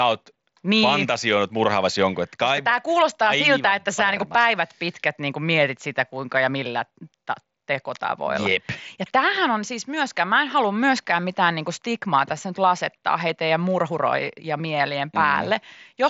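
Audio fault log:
No audio faults to log.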